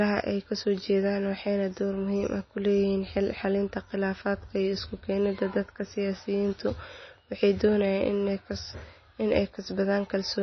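From start to finish the speech sounds watery and swirly, with a metallic chirp on s sounds and softened, smeared attacks, and nothing survives above about 6.1 kHz. This is likely MP3 compression at a very low bitrate, which fits something near 24 kbps. Starved of bits, the encoder chops the treble at a fixed point and drops weak frequency lines that flicker on and off between frames, producing the plainly audible damage.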